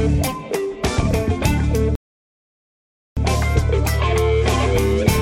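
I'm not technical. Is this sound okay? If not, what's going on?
No. There is a rebuffering stall from 1.95 to 3.17 seconds. At that point the player used up all the audio it had downloaded and had to wait for more, so the sound drops to silence for about 1.2 seconds. When enough data arrived, playback picked up exactly where it had stopped. Nothing was skipped or lost; the pause simply adds that extra time to the listen.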